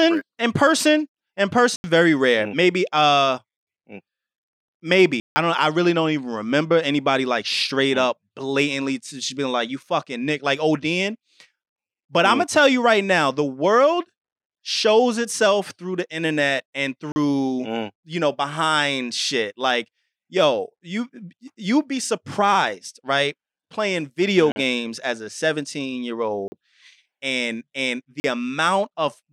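Blocks of digital silence appear at 1.76 s (80 ms, after "in person in", before "very rare"), 5.2 s (160 ms), 17.12 s (40 ms, between "internet and" and "mm you know behind"), 24.52 s (40 ms, before "games as a"), 26.48 s and 28.2 s (both 40 ms). Each time the speech drops abruptly to silence, most likely because the output buffer wasn't filled in time. The sound cuts out and back with no fade, so the 40 ms gaps and the longer ones alike sound like brief holes.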